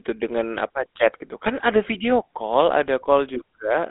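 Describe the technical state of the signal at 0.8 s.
At 0.8 s the speech carries GSM full-rate codec damage, present throughout: pulse-driven excitation gives a buzzy, gravelly roughness, not the clean dullness of plain 200–3600 Hz band-limiting, and nothing passes above 3.8 kHz.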